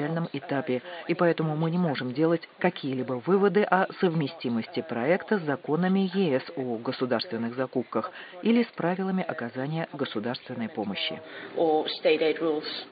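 No technical faults can be heard in the audio; the signal holds steady throughout, with no interruptions, level problems or other defects to point to.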